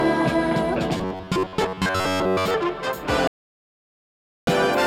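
From 0.98 to 2.54 s the sound turns into a rigid, metallic buzz pitched near 94 Hz, only loosely tracking the original. This is robotic sound from repeated short buffers. New audio likely arrived too slowly, so a chunk of about 11 ms kept being replayed while roughly 70% of the real material was skipped.

At 3.27 s the sound cuts abruptly to total silence, with no room tone at all, and returns only at 4.47 s, leaving a gap of about 1.2 s. This audio dropout to silence likely means the input was lost and silence was written in its place.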